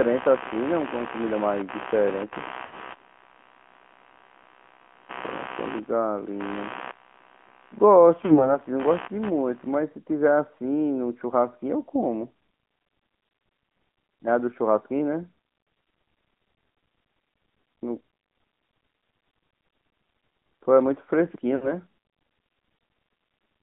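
From the start the speech carries the AMR narrowband mobile codec sound. The band is confined to roughly 200 Hz to 3.4 kHz, and the low-bit-rate vocal tract model adds a plainly audible buzzy, synthetic edge that fits a mid-rate mode near 10 kbps. On a spectrogram nothing appears above the hard ceiling near 3.4 kHz, and the harmonics look smeared and grainy rather than cleanly striped.

From 0 to 9.74 s there is computer activity noise underneath. Processor and peripheral load disturbs the audio circuit's shared ground, producing a chirping buzz that pulses at about 70 Hz, roughly 15 dB below the speech. It swells and drops with the machine's activity rather than following the talker. A spectrogram shows a comb of faint vertical ticks at that repeat rate, running straight through the pauses.

Lost AMR speech frames occur at 2.66–2.86 s, 8.26–8.58 s, 12.40 s and 21.56–21.74 s. After each dropout the decoder repeats its last good pitch and vocal tract settings at falling gain. 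At 12.40 s this is one brief warble. The others sound drawn out and then fade, pointing to two missing 20 ms frames at the first two and three at the last. On the waveform each appears as a stretched, decaying stretch of envelope. On the spectrogram frozen, smeared harmonics fade before the sound resumes slightly rough.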